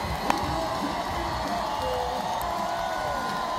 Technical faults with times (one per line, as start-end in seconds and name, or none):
0.30 damaged data in a compressed stream
2.41 damaged data in a compressed stream